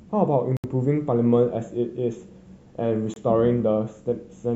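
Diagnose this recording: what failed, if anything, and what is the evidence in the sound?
Two Bluetooth stalls interrupt the speech, at 0.57 to 0.64 s (a 71 ms gap) and 3.14 to 3.16 s (25 ms). The sound drops to silence and then resumes, likely because radio interference delayed packets and the headphone buffer ran empty before retransmissions arrived.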